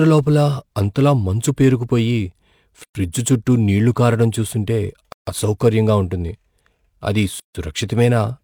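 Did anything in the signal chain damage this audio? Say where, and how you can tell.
Yes. At the converter, sample clock jitter puts a hiss and roughness over the speech throughout. It grows on loud, bright passages and disappears in pauses. Timing error of a few microseconds gives noise roughly 35 dB below the signal.

There is a gap at a join of encoded pieces three times: 2.84 to 2.95 s (116 ms) before "చుట్టూ నీళ్ళు కారడం చూస్తుంటే", 5.12 to 5.27 s (149 ms) before "అసౌకర్యంగా ఉంటుంది", and 7.40 to 7.55 s (151 ms). Each is an untrimmed encoder delay and padding. Speech resumes exactly where it stopped.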